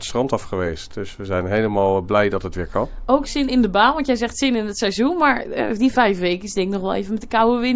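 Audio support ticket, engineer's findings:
No fault found on listening; nothing audible to attribute to any component, no action required.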